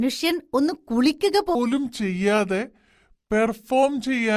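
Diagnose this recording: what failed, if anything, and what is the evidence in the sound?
From 1.55 s to the end, the speech drops abruptly to a lower, slower register, about 5.5 semitones down and running at 0.726 times speed. This is a wrong sample rate at the playback stage: samples replayed without conversion, which fits 44.1 kHz material clocked out at 32 kHz.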